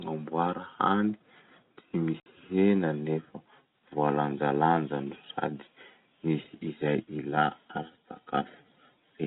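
Packet loss filled with silence at 2.2 to 2.26 s: a 60 ms stretch of the speech never arrived, which fits three consecutive 20 ms packets, and the receiver inserted silence, so the line drops out abruptly with hard edges, against the narrow, telephone-band sound of the G.711 coding.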